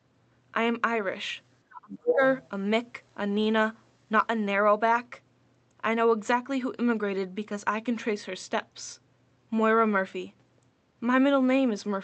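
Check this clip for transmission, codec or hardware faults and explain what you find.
Two related faults sit close together early in the clip, both from acoustic echo control during overlapping talk.

From 1.67 to 2.2 s the talker's speech is suppressed in double talk. It drops sharply, by around 35 dB at its deepest, for roughly half a second, and parts of it nearly vanish. The likely cause is an echo canceller that could not separate the talker from loudspeaker echo while both sides spoke, so it attenuated everything.

From 2.07 to 2.49 s the other side's voice leaks through. A second voice is audible at about the same level as the talker, overlapping the end of that dip. This is likely residual loudspeaker echo that the canceller failed to remove from the microphone signal. The surrounding audio carries the band limit of an Opus call path, with content reaching up to 8 kHz.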